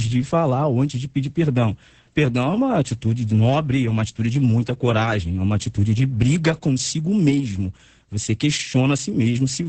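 Opus voice compression runs through the whole speech clip, with the SILK linear-prediction coder squeezing the signal at a rate so low that the excitation is coded only roughly. The heavy damage points to a bitrate around 10 kbps in wideband mode. Nothing survives above about 8.7 kHz, so the voice sounds muffled and dull. The coarse excitation adds a hoarse, slightly robotic edge that persists from start to finish.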